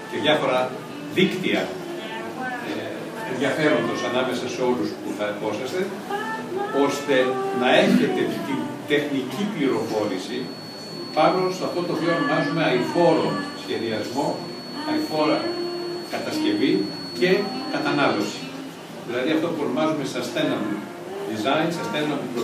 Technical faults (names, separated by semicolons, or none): feedback whistle